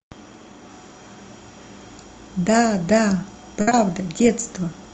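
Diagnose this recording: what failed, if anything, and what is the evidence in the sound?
A burst of packet loss on the network path, from 3.61 to 3.69 s, sounds like the last sound held and fading for about 60 ms before the audio jumps ahead. On a spectrogram the final spectrum stretches flat and dims before the next concealed stretch. On the waveform the envelope decays smoothly into the gap.

A short concealed packet loss follows immediately at 3.69 to 3.73 s. About 20 ms was filled by the receiver's concealment, which continued the prior sound and then blended back in, heard as a brief smear. A spectrogram shows a short, blurred, stretched patch ending in a soft crossfade. The band still stops near 8 kHz, as it does across the clip from the call codec, likely Opus.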